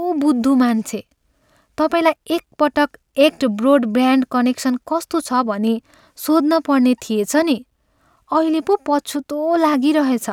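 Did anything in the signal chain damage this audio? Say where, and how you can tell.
No, nothing in the signal chain audibly damaged this speech recording, and no stage between capture and playback has left a detectable mark on it.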